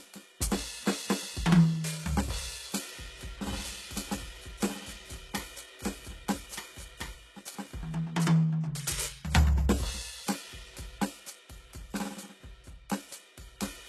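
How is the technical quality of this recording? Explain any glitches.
The recording has two clear problems: coarse codec damage across the whole piece of music, and a stretch where the music is heard twice over itself.

Throughout, the treble sounds gritty and metallic, with nothing above 12.3 kHz. This is likely HE-AAC compression at a very low bitrate, around 16 kbps. Spectral band replication rebuilds the upper range from copied lower bands, so those harmonics don't match the real ones.

From 3.47 s to 7.15 s, a second full-band copy of the music plays about one and a half seconds behind and about 5 dB quieter, starting and stopping abruptly with no room colour. The likely cause is a doubled audio track, where the same audio was mixed in twice, out of step.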